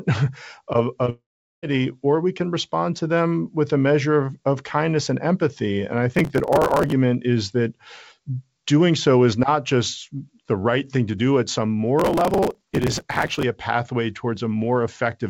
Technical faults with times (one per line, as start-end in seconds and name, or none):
1.05-1.09 short concealed packet loss
1.10-1.63 long network dropout
6.15-6.92 processor overload crackle
11.98-13.43 processor overload crackle